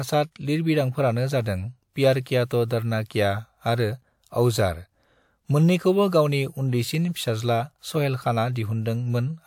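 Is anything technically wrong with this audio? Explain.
Yes. Pre-echo at 2.45 to 2.51 s, after "प्यार किया" and before "तो डरना क्या आरो": the codec spread quantisation noise across its block, so a short hiss precedes the attack by about 58 ms and softens it.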